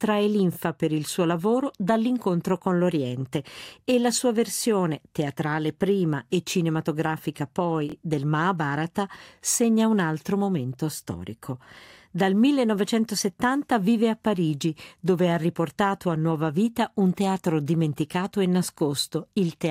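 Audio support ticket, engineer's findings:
Brief stutter with hard joins at 7.90–7.94 s, one short slice of sound heard three times back to back. Repeated buffer: fresh audio missed its deadline, so the output device replayed its last buffer twice. The 23 ms repeat fits a 1024-sample buffer. No audio appears lost.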